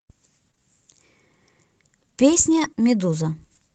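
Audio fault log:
0.51–0.61 s, short concealed packet loss, twice in quick succession: each time about 20 ms of audio failed to arrive in time, and the receiver covered it with roughly 17 ms of synthetic continuation, extending the preceding sound's pitch or noise before crossfading back. The two events overlap, with the second falling at 0.55–0.59 s, so the patch sounds like a brief smear or wobble. A short consonant there may be lost. The concealment also stretches timing by about 15 ms.
2.52–2.66 s, lost packet rebuilt from error correction: 80 ms of audio, consistent with four lost packets, was reconstructed from the low-bitrate redundant copies Opus embeds in following packets. There is no gap, but this stretch sounds rougher and noisier than its surroundings because the copies carry less detail. It plays through a wideband Opus path limited to about 8 kHz, which adds its ordinary coding noise across the clip.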